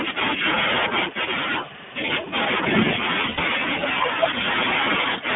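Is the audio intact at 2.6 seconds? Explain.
No. At 2.6 seconds, as throughout, the speech carries iLBC codec damage: each short frame, consistent with 20 ms at about 15 kbps, is coded independently, leaving a rough, synthetic edge. A spectrogram shows energy confined to roughly 150 Hz to 3.5 kHz, blank above.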